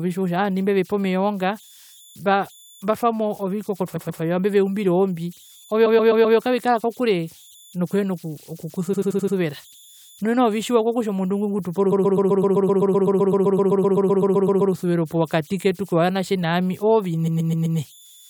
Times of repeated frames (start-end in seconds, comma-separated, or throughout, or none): 3.95-4.21, 5.85-6.37, 8.93-9.35, 11.91-14.73, 17.27-17.78